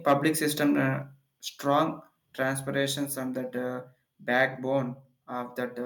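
From 0.08 to 0.27 s the speech shows microphone overload: the loudest peaks are flattened at the converter's ceiling, with the input driven about 4 dB past full scale. Only a small fraction of samples are clipped, but each adds a harsh, crackling edge. Excessive input gain is the likely cause.

At 1.02 s the microphone volume is stepped down: the voice and background drop together by about 3 dB in one abrupt step. This likely comes from the call software reacting to the earlier clipping by lowering the device's input level.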